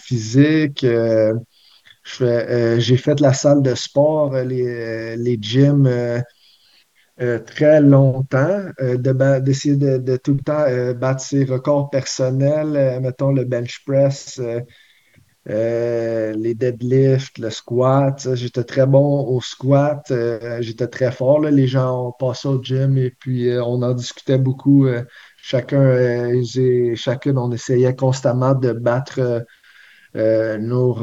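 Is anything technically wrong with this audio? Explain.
Yes. The speech has concealed Bluetooth headset packet loss, at 1.68 s and again from 15.09 to 15.13 s, carried over the mSBC headset link whose band stops near 8 kHz. When headset packets drop, the phone fills the gap by repeating the best-matching stretch of recent waveform. The 1.68 s loss, about 7.5 ms and consistent with one packet, is nearly inaudible. The 15.09 s run, about 37.5 ms, sounds like a brief buzzy tone at full level with a slight warble as real speech resumes. A waveform shows periodic copies with no level dip, and a spectrogram shows flat, evenly spaced horizontal harmonics.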